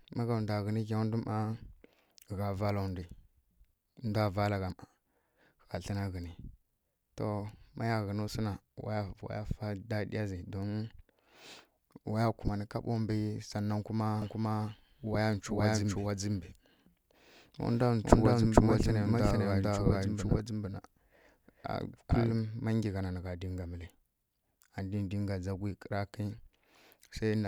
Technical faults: doubled audio track

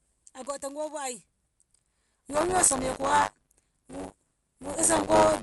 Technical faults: buffer tearing; Dolby Digital compression

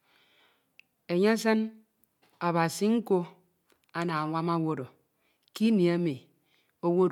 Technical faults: none

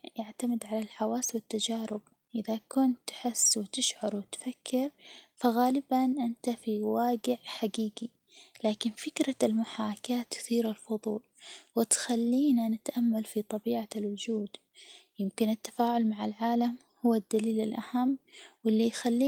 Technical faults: none

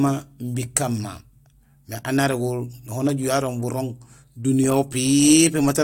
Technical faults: none

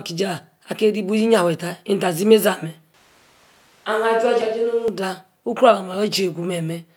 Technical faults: switch to a distant microphone

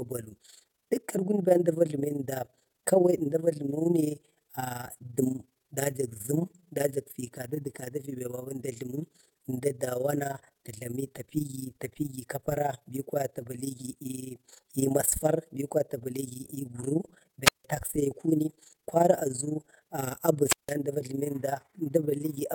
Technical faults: overlap-add ripple; wireless microphone squelch dropout

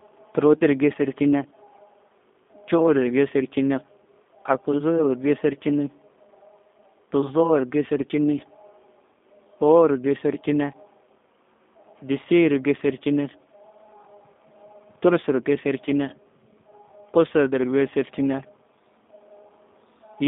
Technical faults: G.729 codec

